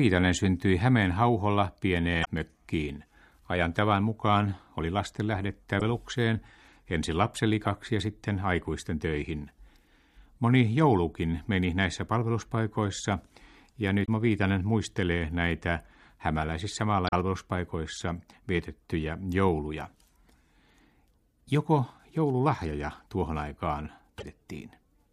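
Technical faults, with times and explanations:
2.21–2.28 s, 5.79–5.81 s (after "tavan mukaan oli lasten"), 14.02–14.08 s, 17.05–17.13 s (after "muistelee näitä hämäläisissä") and 24.15–24.23 s: damaged data in a compressed stream. Each is a brief chirp, squawk, click or short hole of 26 to 81 ms that breaks into the speech. Corrupted bytes make the decoder misread or refuse frames and lose sync, so the sound breaks up until it locks onto the next valid header.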